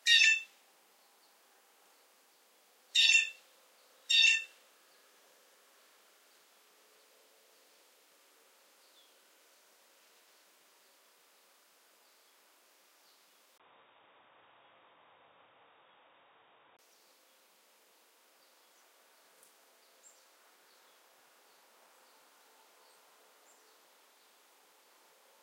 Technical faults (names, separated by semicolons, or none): input switched to a poorer device